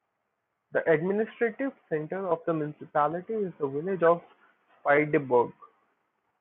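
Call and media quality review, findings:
Corrupt frame decoded at 2.44 s and 4.06 s, short glitches where the decoder played a few bit-damaged frames as-is. First one's error peaks near -60 dBFS, second much louder. Codec/decoder side.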